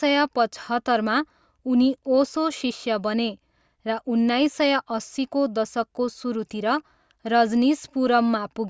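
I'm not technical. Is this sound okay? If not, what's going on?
Yes, nothing in this recording stood out as a problem when I listened to it.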